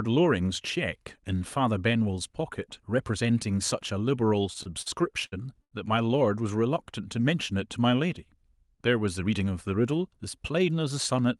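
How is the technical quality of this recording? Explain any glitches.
The recording has two kinds of network glitch, both in the receiver's jitter buffer, on top of a call codec whose audio tops out around 12 kHz.

Short stalls from a late packet occur four times, at 4.63, 4.82, 5.26 and 5.62 s. Each time, a packet arrived after its playout moment and the buffer ran dry. The receiver stretched the last speech sound for 27, 44, 60 and 96 ms respectively, then resumed exactly where it left off. Nothing is lost, but each sound is held unnaturally long, with a faint buzz or dip.

A jitter buffer speed-up runs from 9.24 to 9.48 s. By then the buffer held more audio than its target, so the receiver trimmed short pitch-period-sized pieces in quick succession, removing about 40 ms in total. Playback runs at roughly 114% speed for that quarter second. The pitch stays the same, but the speech sounds briefly rushed.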